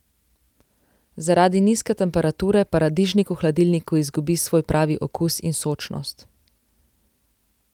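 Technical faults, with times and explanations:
No technical faults can be heard in this speech clip.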